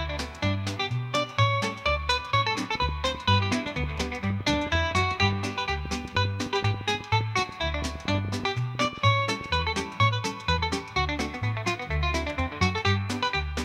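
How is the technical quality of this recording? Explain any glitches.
The recording is marred by one sustained fault: a train of clicks from 2.75 s to 9.47 s. Around fifty sharp, similar ticks arrive unevenly at about 7 per second, peaking a few decibels above the sound itself. The likely cause is interference from nearby equipment or a faulty connection or power supply injecting repeated pulses, which sit on top of the audio and stay audible in the pauses.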